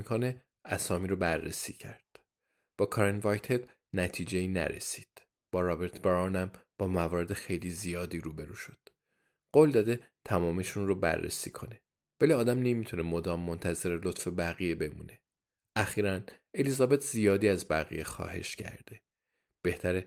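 Nothing in this speech recording stands out as a technical problem, so there's nothing to point to here.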